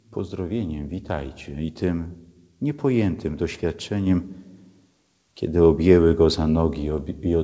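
No technical faults are audible.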